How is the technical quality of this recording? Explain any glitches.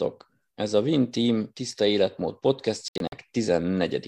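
The recording has one clear glitch, a digital broadcast dropout, shortly before the end of the speech.

From 2.88 to 3.13 s, just after "tiszta életmód", the sound breaks into short silent holes. About 144 ms of audio is lost across that 240 ms stretch, and the longest hole is 72 ms, a pattern that fits roughly six rejected frames. The receiver muted whenever frames failed their checks and resumed on good ones. Unlike network packet-loss concealment, nothing fills the gaps. The sound simply drops to silence and comes back later in the speech.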